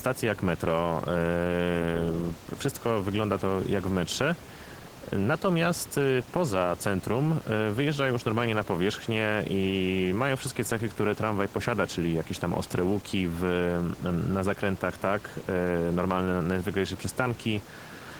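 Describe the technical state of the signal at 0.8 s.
At 0.8 s the speech carries Opus voice compression, and it runs through the whole clip. The sound points to a low bitrate near 16 kbps in hybrid mode. A linear-prediction coder handles the lower band and a transform layer handles content above 8 kHz, so the band reaches about 20.1 kHz. The excitation is coded coarsely in 20 ms frames. The damage is plainly audible as a hoarse, slightly robotic edge. The room noise sits about 17 dB below the speech.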